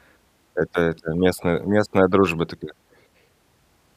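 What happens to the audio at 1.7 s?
Nothing goes wrong at 1.7 s; the speech continues cleanly through that moment with no dropout, click or distortion.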